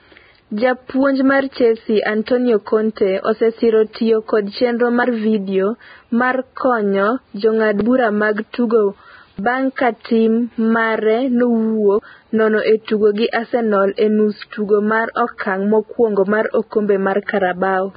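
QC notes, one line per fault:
throughout, Vorbis compression: the treble is hissy and grainy and the tops of the speech sound cut off, with blurry consonant attacks. That's likely a low-rate Vorbis encode around 15 kbps, where the high band gets quantised so coarsely its detail turns into noise.
5.04 s, 7.81 s, 9.39 s, 11.99 s, dropped buffer (overrun): the speech jumps ahead with no gap, at 5.04 s between "osesiro tiyo kod chenro" and "vidio mar konyo jong'ad", at 7.81 s just before "bura mag tugo", and at 9.39 s right after "jong'ad bura mag tugo". The first three skip roughly 40 ms each, while 11.99 s loses something like 150 ms. Chunks were most likely overwritten before being read, so the two sides butt straight together.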